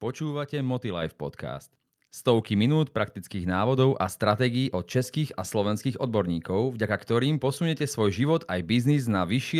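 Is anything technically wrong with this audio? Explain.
Yes. At 1.02 s the microphone volume steps up by about 5 dB. The call software raised the device's input gain at once, so voice and background jump louder together.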